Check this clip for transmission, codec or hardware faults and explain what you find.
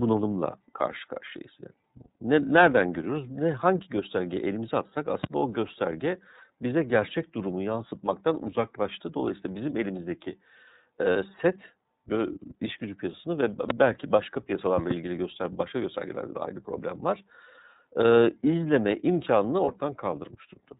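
Three faults are present: codec coloration throughout, two loud pops, and two brief concealment gaps.

Throughout, the speech is band-limited with nothing above 4 kHz and has a plainly audible rough, synthetic edge. This is the iLBC codec, a narrowband VoIP coder that encodes each frame's excitation independently; the texture points to its 30 ms frame mode at about 13.33 kbps.

At 5.24 s and 13.7 s a sharp pop sits on top of the speech, which continues beneath it. The first peaks about 15 dB above the signal and the second about 20 dB. Each is likely a loud pop from a voltage step or pulse, such as a plug, switch, static or driver glitch, shaped by the downstream circuitry.

At 11.13 to 11.17 s and 19.64 to 19.68 s the sound briefly turns into a held, buzzy or breathy tone, and then clear speech returns at once. These are lost iLBC frames. Each gap of about 30 ms fits one missing frame, and the decoder filled it by repeating the last pitch cycle mixed with noise.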